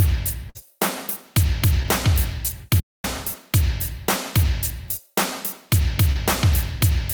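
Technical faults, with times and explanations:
0.49 to 0.67 s: burst of packet loss. A run of audio arrived too late or not at all. The receiver carried the last sound forward for about 54 ms and let it fade. This gives a brief held, dwindling sound instead of fresh audio. About 60 ms of the original is gone. When real audio returns, it picks up further along, so the sound seems to jump ahead.
1.83 to 1.86 s and 6.12 to 6.17 s: short concealed packet loss. Each time, about 20 ms of audio missed the decoder. The receiver patched the hole by extending the preceding sound, for about 13 ms in the first case and about 31 ms in the second. It then blended back into the real signal. The result is a quick smear or wobble, and any very short sound in that spot can drop out.
2.80 to 3.04 s: playback stall. The output cuts to silence mid-flow for about 0.24 s, then sound resumes. Nothing is patched in, so the break is a clean, noticeable hole rather than a smear. 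The likely cause is that the player ran short of data or its thread was held up. Output stopped until it caught up again.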